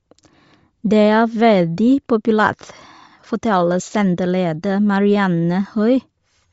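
From start to finish the speech carries plainly audible codec damage, most likely Bluetooth LC3 compression. Nothing reaches above 7.7 kHz, and the upper band that remains sounds breathy and grainy, as if zeroed detail were replaced with noise at a low bitrate, which fits about 32 kbps with 10 ms frames. A spectrogram shows a hard ceiling at 7.7 kHz with speckled, noise-like texture below it, changing in frame-sized blocks.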